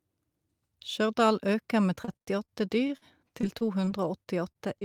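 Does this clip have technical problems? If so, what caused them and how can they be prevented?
Yes. Repeated packet loss (robotic sound) occurs from 1.95 to 3.03 s and from 3.41 to 4.83 s. Gaps of up to 47 ms are patched by extending the preceding sound, so the speech turns choppy with pieces missing. Unlike a single dropout, the holes recur in quick succession. A steadier network path or a larger jitter buffer would prevent it.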